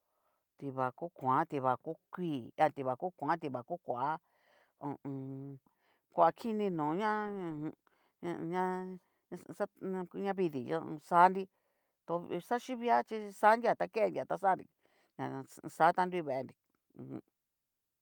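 A recording of speech with nothing technically wrong to report. No fault can be heard anywhere in it.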